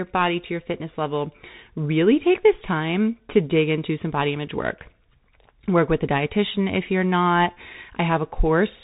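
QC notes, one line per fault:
Throughout: Bluetooth CVSD headset codec. The speech is band-limited with nothing above about 3.8 kHz, giving the flat, boxed-in headset sound. The damage is plainly audible, which fits the 64 kbps CVSD link. That coder sends a single up-or-down bit per sample and adapts its step size. Where the signal rises faster than the step can follow, loud bright passages distort and sibilants turn scratchy. A granular hiss sits under the speech.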